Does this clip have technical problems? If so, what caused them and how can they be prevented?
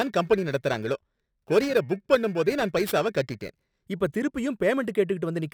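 Yes. Periodic clock jitter from 0 to 3.88 s, at around 2 kHz, puts sidebands on each harmonic, visible as mirrored spectrogram lines, giving the speech a metallic rasp. Isolating the converter's clock from interference prevents it.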